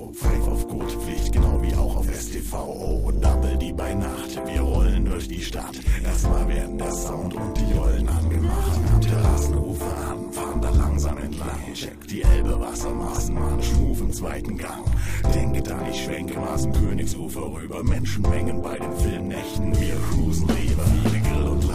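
No technical faults can be heard anywhere in this recording.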